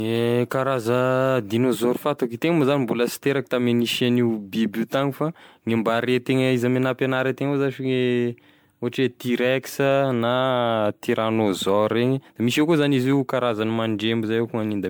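Swirly, hollow speech with smeared consonant attacks and no content above 19.9 kHz throughout, likely generation loss from around fifteen MP3 passes at what sounds like 128 kbit/s.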